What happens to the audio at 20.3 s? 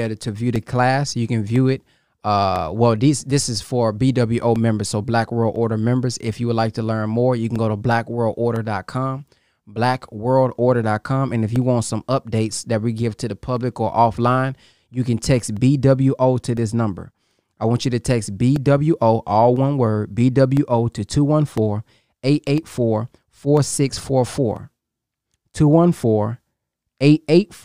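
At 20.3 s the speech falls inside a run of periodic USB or driver dropouts lasting from 0.56 s, just after "to view", to 27.57 s. Once a second, something stalls the audio driver. Roughly a millisecond of signal is replaced by silence. Each gap sounds like a small tick during the speech.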